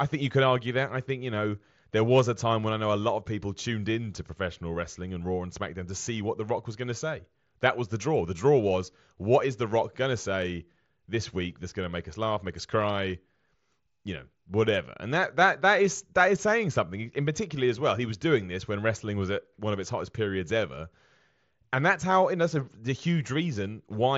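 Nothing stood out on listening to this speech carried over a Bluetooth mSBC headset link.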